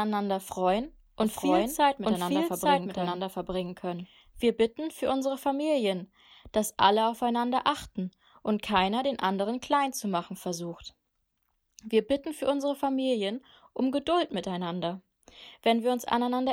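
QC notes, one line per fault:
1.23–4.41 s, doubled audio track: the speech repeats about a second behind at roughly equal level, starting and stopping abruptly, likely from a second, slower capture path.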